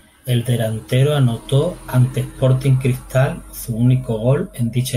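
No audible technical faults.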